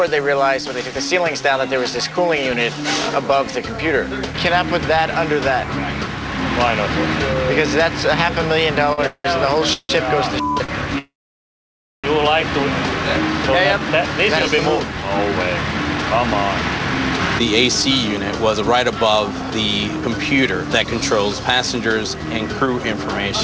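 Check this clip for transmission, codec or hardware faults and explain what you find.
Two faults are audible, both in the middle of the clip and both from delivery timing rather than lost audio. The band stops at 8 kHz, as expected for a G.722 call path.

Repeated stalls (stutter) run from 8.93 to 10.72 s. Packets arrived late, so the jitter buffer ran dry four times, the longest gap lasting 178 ms. The receiver stretched the last sound to fill about 430 ms, roughly a quarter of that span. It sounds dragged and hiccupping. A spectrogram shows smeared, repeated frames.

A call audio freeze follows from 10.99 to 12.07 s, likely caused by packets being held up in transit. About 1.05 s of fill is inserted, mostly silence, roughly 950 ms of it. The waveform goes flat before the sound resumes where it stopped, with nothing missing.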